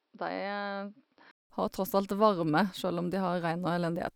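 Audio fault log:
0.0–1.5 s, input switched to a poorer device: speech sounds dull and somewhat quieter, with nothing above 5.6 kHz and faint new background noise, then a 0.19 s silence; likely a narrower-band microphone.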